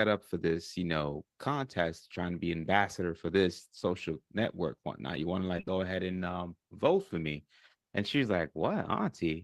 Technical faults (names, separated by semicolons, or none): short concealed packet loss